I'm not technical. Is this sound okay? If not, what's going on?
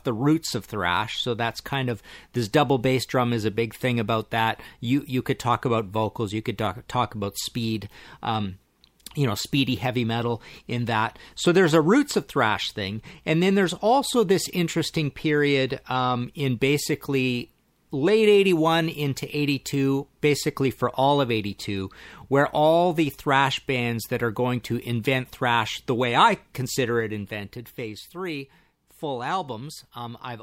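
No. From 26.87 to 28.12 s, just after "thrash the way I", a ticking or zipping rides on the speech as it gets quieter. That's zipper noise: the volume drops in small jumps, about four a second, instead of gliding, and each jump clicks.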